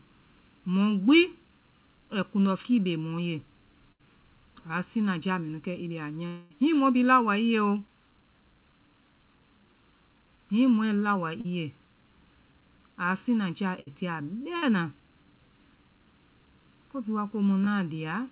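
Throughout, the speech has a hollow, phasey colour from channel delay (comb filtering). One channel lags the other by about 0.7 ms, and summing them to mono cuts evenly spaced notches starting near 700 Hz. The band-limited, telephone-like top, with nothing above 4 kHz, fits a narrowband call codec.

At 2.51–2.68 s a wireless microphone noise hit is heard as a short swish of static. The radio link faded, and receiver noise rose over the signal. A second hit at 6.70–6.83 s sounds the same.

At 3.92–4.01 s a burst of packet loss removes about 80 ms. The receiver holds the last sound for about 71 ms as a fading buzz or hiss, and the audio then picks up further on. This repeats at 13.80–13.88 s after "a siŋnaja", losing about 60 ms, and at 14.56–14.64 s, again about 60 ms.

From 6.27 to 6.52 s, about 240 ms is gone. A continued, fading buzz or hiss fills about 230 ms, with no silent stretch before the sound returns. 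The likely cause is a long network dropout.

A short concealed packet loss at 11.41–11.46 s, between "mɔɛ laowa" and "i ye", leaves a brief smear where about 40 ms was lost and about 35 ms patched from the preceding sound. Another at 17.65–17.68 s, after "bhii wa", covers about 20 ms and is heard as a brief smear.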